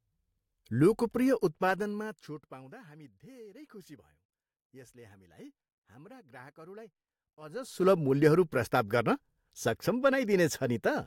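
Zipper noise: the speech level is changed in unsmoothed steps. From 1.35 to 2.75 s it drops about 25 dB at roughly thirty steps a second, making a fast ticking. From 7.40 to 7.85 s it rises about 25 dB at around a hundred steps a second, which sounds like a buzzier zip.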